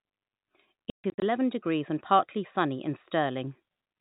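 A speech clip carried over G.711 telephone coding, so nothing above 4 kHz. Packet loss filled with silence chops it between 0.9 and 1.22 s, just before "degrees and partly sunny": about 220 ms of audio drops out across that 320 ms stretch, the longest hole lasting 140 ms. The gaps are hard-edged silences, which fits 20 ms packets.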